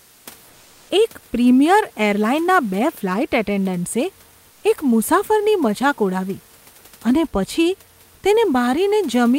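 Comfort noise in place of the background appears at 0.00–0.25 s, 0.49–0.89 s before "એક પ્રીમિયર એરલાઈનના બે", 4.51–4.63 s after "એરલાઈનના બે ફ્લાઈટ એટેન્ડન્ટ્સે", and 8.15–8.23 s after "અને પછી". The room noise turns flat and featureless, slightly quieter, likely from Opus discontinuous transmission.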